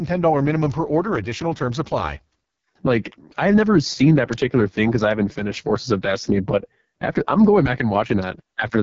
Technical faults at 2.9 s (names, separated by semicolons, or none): AMR wideband (HD Voice) codec